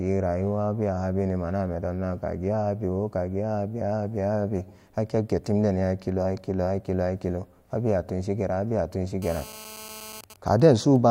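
Just after "abewa tunshi", from 9.22 to 10.21 s, GSM phone buzz: a rectified 217 Hz call transmission about 16 dB below the speech, showing as evenly spaced harmonic lines. From 10.24 to 10.96 s, GSM signalling bursts from the phone, its user silent, give even ticks with a longer buzz twice a second, seen as evenly spaced vertical stripes, roughly 20 dB down.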